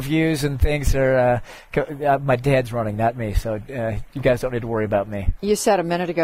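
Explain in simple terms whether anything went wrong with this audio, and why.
Nothing went wrong here: the signal stays steady and intact the whole way, with no dropouts, glitches or sudden changes at any point.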